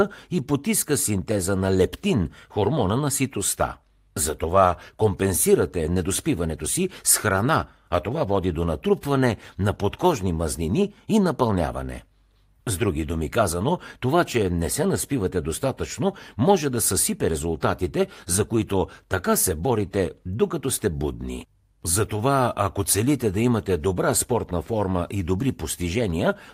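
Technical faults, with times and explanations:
Nothing stood out on listening to this speech recording.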